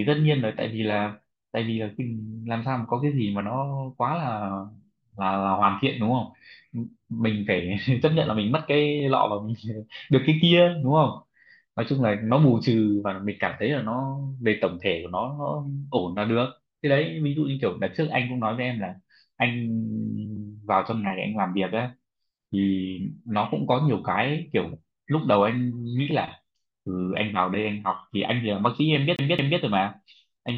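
CD stuck on one turn appears from 29.16 to 29.60 s: a scratch knocks the laser back one track each revolution, so the same 0.22 s of speech repeats twice, each return marked by a brief mute, giving the quick, regular stutter of a skipping disc.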